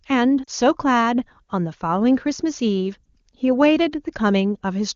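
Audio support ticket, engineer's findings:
Lost AMR speech frames at 0.44–0.50 s and 3.04–3.06 s. First spot: two frames, about 40 ms, drop to near silence. Second: one frame, a brief dip or warble. Decoder concealing CRC-failed frames by repeating the last good parameters. Clear AMR-WB audio around it.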